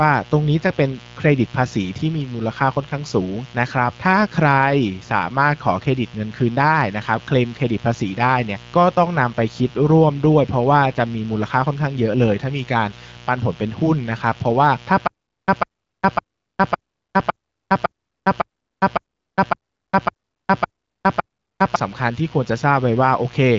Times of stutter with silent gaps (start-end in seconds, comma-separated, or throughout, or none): 15.07-21.76